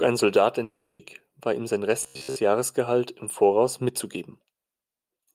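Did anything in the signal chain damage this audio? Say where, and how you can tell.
Yes. There is a long network dropout from 0.63 to 1.01 s. About 360 ms of the sound is missing, and the gap never drops to silence. Instead, the last fragment is stretched into a buzzy, hissing tail that fades across the whole interval. When the sound resumes, that 360 ms is simply absent. This is most likely packet loss on the network path, with the receiver's concealment papering over the hole.

There is robotic sound from repeated short buffers between 2.03 and 2.36 s. The sound takes on a rigid, metallic buzz at about 66.7 Hz, which means a 15 ms stretch is being looped. Roughly two-thirds or more of that segment is repetition rather than new material, so the contour only loosely survives. The likely cause is a starved playback or jitter buffer replaying its last block while fresh audio arrives too slowly.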